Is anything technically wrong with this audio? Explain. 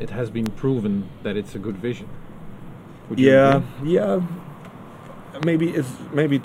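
Yes, there are three loud pops, at 0.46 to 0.48 s, 3.52 to 3.54 s and 5.43 to 5.45 s. Each single pulse peaks about 15 dB, about 20 dB and about 15 dB above the sound. The likely cause is a brief voltage spike, from a switch, static or driver glitch, added to the signal. Each is heard as a sharp pop while the sound continues underneath.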